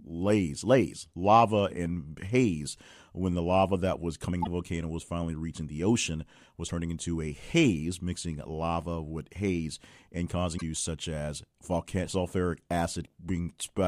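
At 4.40 to 4.47 s, 6.65 to 6.71 s and 10.54 to 10.62 s the speech is broken by brief glitches, each lasting roughly 55 to 80 ms. These come from damaged data in the compressed stream. Corrupted bytes leave the decoder unable to read those frames correctly, so it loses sync and hunts for the next valid frame header. The result is a short chirp, squawk, click or hole in place of the intended audio.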